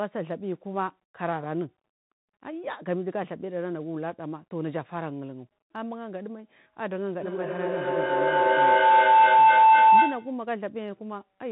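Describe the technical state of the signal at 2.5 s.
At 2.5 s the speech carries the Bluetooth CVSD headset codec, present for the whole clip. The codec sends one up-or-down bit per step, which fits a 64 kbps stream. Nothing above 4 kHz survives. Sibilants sound scratchy. A grainy hiss sits underneath.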